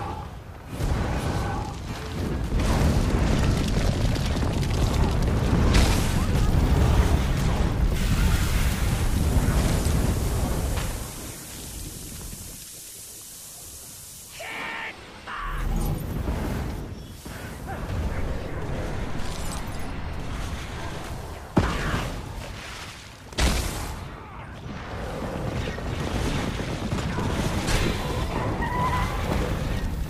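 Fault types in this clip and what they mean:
Lost LE Audio frames: at 1.90 to 1.94 s and again at 10.45 to 10.52 s, Bluetooth LE Audio frames went missing, about 30 ms in the first gap and 45 ms scattered across 60 ms in the second, whose longest unbroken run is about 30 ms. Both fit 7.5 ms frames. The LC3 decoder filled each hole by replaying the last good spectrum with randomised signs, so the sound briefly turns into a grainy, noisy smear instead of dropping out.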